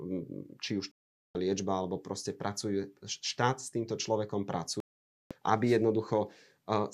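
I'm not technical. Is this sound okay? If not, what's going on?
No, there are two kinds of fault here. The first is a digital broadcast dropout, and it happens twice. From 0.92 to 1.35 seconds the sound goes silent for about 0.43 seconds, coming back just before "liečba alebo proste pracuje". From 4.80 to 5.31 seconds, right after "s týmto človekom", it drops out again for about half a second. In both cases the receiver lost the signal or got damaged data, so it muted until clean data returned. Whatever was said in those gaps is gone.

The second is dropped samples, a single sharp click at 3.46 seconds, between "liečba alebo proste pracuje" and "s týmto človekom". A tiny sliver of the recording, only a handful of samples and far shorter than a millisecond, is likely missing there. The sound jumps abruptly from one point to a slightly later one and makes a brief tick. Nothing audible is lost.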